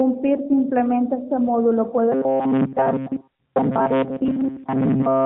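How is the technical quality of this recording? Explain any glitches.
The first 2.1 s is clean narrowband speech, band-limited at 4 kHz by the AMR narrowband mobile codec. From 2.12 s onward it turns robotic, and a brief AMR bit-error burst adds further damage near the end.

From 2.12 s to the end, the speech takes on a rigid, metallic buzz at 133 Hz that only loosely tracks the syllables. This is robotic sound from repeated short buffers, most likely caused by audio arriving too late, so the player loops the last fragment of about 7.5 ms, with most of the real signal skipped.

Between 4.28 and 4.37 s, the voice turns briefly hoarse and gargly while keeping roughly its pitch and level. These are AMR bit errors: corrupted bits in about four 20 ms frames, at a rate of a couple of percent, misplaced the excitation pulses and skewed the finer gain and spectral values.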